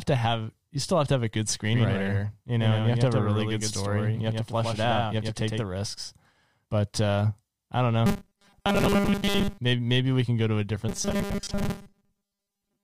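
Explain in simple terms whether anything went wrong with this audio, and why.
Yes, two things go wrong in this speech.

From 1.74 to 5.64 s, right after "to have a good", there is a doubled audio track. Each syllable is followed about a tenth of a second later by a slightly quieter copy of itself, a flat, clean echo with no room sound, and it starts and stops suddenly. The likely cause is the same sound being picked up a second time through a slower route, so two copies play slightly out of step.

From 8.06 to 9.59 s, after "uh I don't", and again from 10.89 s to the end, after "can go to a", the voice turns into a stiff, metallic buzz that still roughly follows the words. This is robotic sound from repeated short buffers. Fresh audio is arriving too rarely, so the software likely fills the gaps by replaying the last tiny slice, about 5 ms long, over and over. Most of the real sound in these stretches is skipped, and the constant repetition forces a steady 200 Hz hum onto the voice.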